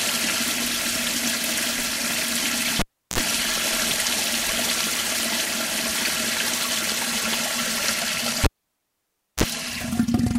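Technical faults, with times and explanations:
2.79–3.18 s and 8.44–9.44 s, cable pulled and plugged in: a pop, then near silence for 0.34 s and 0.95 s, then a 60 Hz mains buzz of 46 ms and 36 ms as the plug's tip makes contact first. The buzz and the pops set it apart from a plain dropout.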